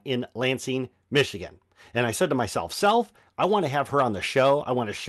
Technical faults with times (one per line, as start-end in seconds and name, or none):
none